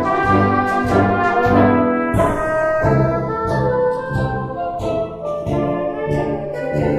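From start to finish the two channels are drifting apart: each side was captured on its own clock, and the clocks disagree by something like 70 parts per million, so the gap between them grows steadily to a little under half a millisecond by the end. Folded to mono, the comb-filter notches glide slowly through the spectrum as a slow flange. Unlike a fixed channel offset, the coloration keeps moving, and unlike a flanger effect it sweeps one way without cycling back.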